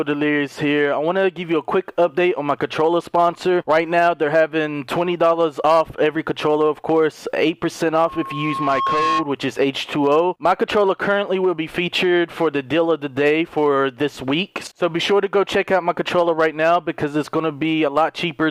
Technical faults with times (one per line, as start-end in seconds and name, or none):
7.93-9.29 loudspeaker feedback squeal